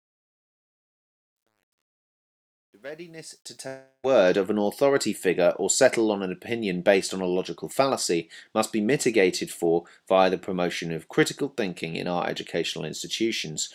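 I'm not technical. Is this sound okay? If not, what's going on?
No. From the start to about 4.4 s there is truncation distortion on a fade, worst up to about 3.3 s. As the fade gets quieter, the sound turns gritty and grainy instead of simply softer. That roughness follows the volume, which sets it apart from steady background hiss, and it points to a volume stage keeping only about 11 bits.

At 3.67 to 4.05 s there is a long network dropout, likely caused by audio that never arrived. For about 0.36 s the sound is replaced by a fading buzz or hiss that ends in roughly 0.11 s of silence. The sound then resumes with that stretch missing. Unlike a single click or crackle, a piece of the sound is simply gone.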